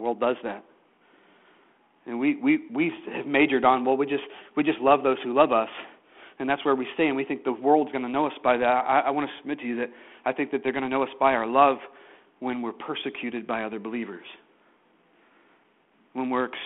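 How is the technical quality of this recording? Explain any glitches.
Nothing glitches here: the speech comes through a 32 kbit/s G.726 phone link with the usual telephone band of roughly 250 Hz to 3.4 kHz, and there are no dropouts, clicks or other faults to explain.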